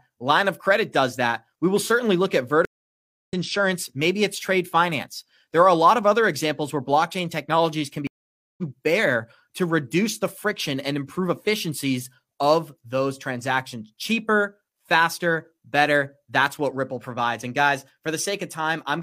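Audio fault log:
2.65–3.34 s and 8.07–8.63 s, stream reconnect. Sound cuts off after "will certainly look at" and "where blockchain technologies can". Silence lasts 0.64 s, then 0.51 s. The connection dropped and a fresh decoder restarted mid-stream. Each time the audio resumes roughly 0.7 s further on, at "insurance maybe it's trade" and "bear to reduce the".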